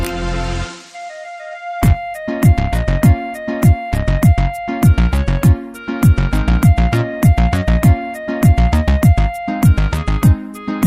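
No technical faults are audible anywhere in the clip.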